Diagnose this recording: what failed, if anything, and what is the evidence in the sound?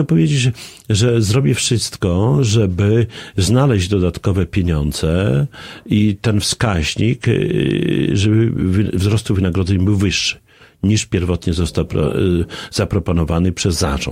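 Nothing in the recording stood out as a fault on listening, so there is no failed stage to point to.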